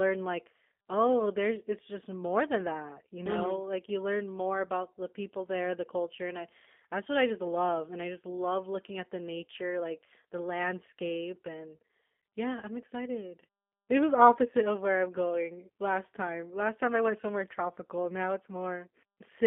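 From start to end, the speech carries G.729 codec damage. The band runs only from 200 Hz to 3.5 kHz. The speech sounds rough and synthetic, rebuilt from a vocal tract model and sparse pulses. The damage is plainly audible and fits an 8 kbit/s VoIP link.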